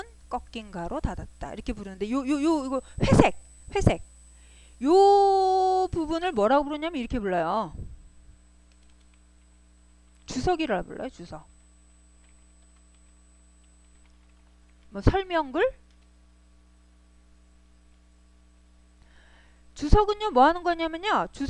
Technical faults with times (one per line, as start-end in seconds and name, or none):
6.45-21.49 de-emphasis applied wrongly